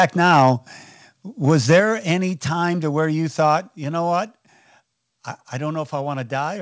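From 0.0 to 0.51 s the speech has a harsh, crackling edge on its loudest syllables. The peaks are flattened at the top, about 7 dB past the converter's limit. The likely cause is microphone overload, with the input level set too high for the converter. At 0.40 s, inside that stretch, the microphone volume stepped down by about 2 dB. Voice and background drop together at once, likely from the call software cutting the input gain.

Microphone overload returns from 1.47 to 1.80 s, about 5 dB over. It has the same gritty tops and is likely from the same hot input. At 1.80 s, just before "any time", another step-down of about 4 dB follows, likely the software reacting again. The band above 8 kHz is empty, which fits the G.722 call path.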